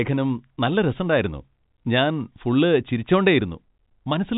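No technical faults can be heard in this speech clip. It carries the narrow band of G.711 telephone coding, with nothing above about 3.8 kHz and only faint coding noise riding under the speech.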